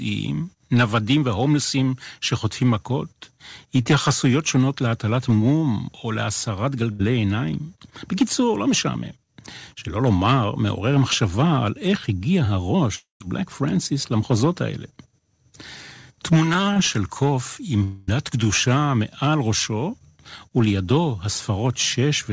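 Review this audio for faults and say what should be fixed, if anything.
Around 3.82 s there's a short concealed packet loss: about 40 ms never arrived in time, so the decoder stretched the previous sound, leaving a quick smear. A slightly deeper jitter buffer would let late packets arrive in time to be played.

At 6.92 to 7.01 s a burst of packet loss drops about 80 ms. The receiver holds and fades the last sound, then jumps ahead with that bit gone. Forward error correction or redundant packets would let the receiver rebuild a short run of losses like that.

Two longer gaps sound like a long network dropout, likely a stall on the link. At 12.95 to 13.22 s a fading continuation of the last sound gives way to silence. At 17.84 to 18.09 s roughly a quarter second is patched with a fading continuation and then the audio resumes further on. A steadier, lower-loss network route is the real fix here, since nothing in the receiver can restore that much audio.

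The band stops at 8 kHz, which fits the wideband G.722 call codec the audio went through and isn't a fault in itself.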